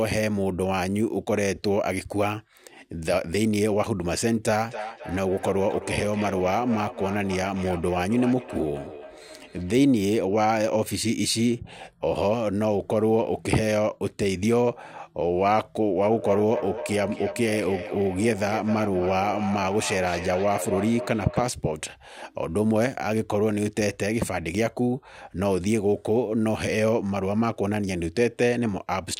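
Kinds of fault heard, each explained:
Feedback echo between two devices: a second device replays the speech into this microphone, so words return at a steady interval of about 0.3 seconds, up to about 9 dB below the speech. Unlike reverberation's continuous smear, these are distinct, evenly spaced repeats.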